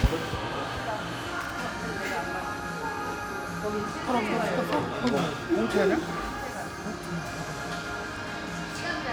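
A short burst of irregular crackle and scratching breaks into the sound from 1.41 to 1.50 s. That is loose connector crackle: a worn contact briefly making and breaking.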